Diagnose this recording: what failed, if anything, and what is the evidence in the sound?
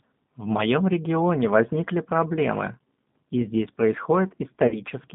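The codec stage is at fault. The speech is confined to a narrow band, about 150 Hz to 3.6 kHz, with nothing above it. Throughout, the voice has a plainly audible rough, synthetic grain. That texture points to G.729 at 8 kbit/s. This G.729 codec does not send the waveform. It rebuilds each 10 ms frame from a vocal tract filter, a pitch predictor and a few coded pulses. That model leaves the rough, slightly artificial edge heard here.

The network stage also failed, with VoIP packet loss concealed by the speech codec at three points. From 0.58 to 0.66 s and from 2.34 to 2.38 s, the voice briefly smears and thins. Each event fits about 10 ms of lost audio. From 4.68 to 4.81 s the damage is longer, fitting about 40 ms lost. The decoder filled each gap by extending its last pitch and filter at falling gain. The voice stays weak and distorted after packets resume, because each frame depends on the previous one.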